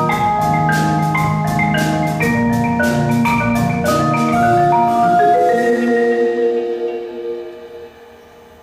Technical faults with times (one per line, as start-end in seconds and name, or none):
none